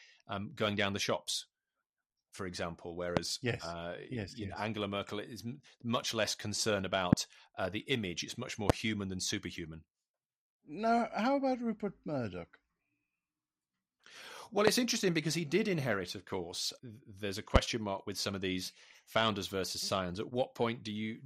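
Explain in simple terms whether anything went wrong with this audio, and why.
The speech has two problems.

Throughout the clip there is MP2 compression damage, and it is plainly audible. The speech sounds dull and muffled, with a gurgling, grainy edge. This older compression method splits the sound into many narrow frequency slices and shares out a limited budget of detail. Short of detail, it switches the highest slices off and stores the rest roughly, so the top end flickers in and out. The likely cause is saving or broadcasting the audio in MP2 with too little data allowed. Unlike hiss or a bad microphone, this damage follows the speech itself and churns as the sound changes.

There are also five loud pops, each a sharp snap lasting about 25 ms. They start at 3.17 s, right after "for example", at 7.13 s, after "much less concerned" and just before "uh the image it's", then at 8.70 s, at 14.67 s, just before "interesting because he did", and at 17.56 s. 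Each is a single sudden jolt laid on top of the recording, likely from an electrical spike such as a plug, switch or static discharge. Unlike a dropout, the speech never stops; it carries straight on underneath each pop.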